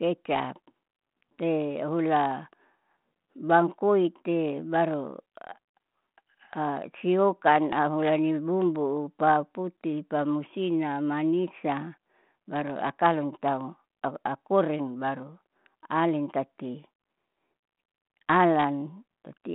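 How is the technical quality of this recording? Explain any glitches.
No glitches can be heard in this speech recording. It has the narrow band of a telephone line, roughly 150 Hz to 3.4 kHz, passed through G.726 ADPCM at 32 kbit/s, which leaves only a light graininess on the speech.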